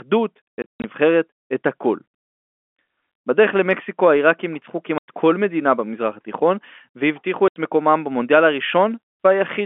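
Packet loss filled with silence chops the speech three times. From 0.58 to 0.84 s, 200 ms drop out in scattered gaps, the longest 140 ms. Then 4.98 to 5.08 s, and 7.48 to 7.56 s. Silence replaces lost packets. Gap lengths fit 20 ms packets. The gaps have hard edges.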